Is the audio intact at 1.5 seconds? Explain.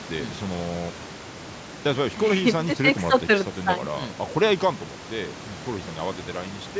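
Yes, the speech at 1.5 seconds is intact: the room noise about 11 dB below the speech and the call microphone processing's bass roll-off and 8 kHz top end are ordinary parts of the recording path, not faults.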